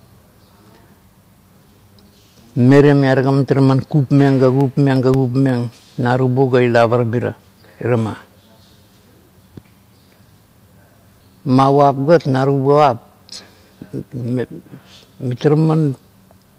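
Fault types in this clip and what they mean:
CD scratch ticks: a scratch destroys more data than error correction can rebuild once per disc turn, so the player patches or mutes it. Two bursts of ticks, about six a second and a few milliseconds each, show as thin vertical spectrogram lines and tiny waveform notches.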